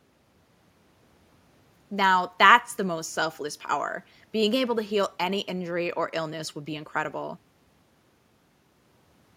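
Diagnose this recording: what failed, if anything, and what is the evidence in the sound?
Nothing failed here; I can't hear anything in this speech recording that points to a problem at any stage of the chain.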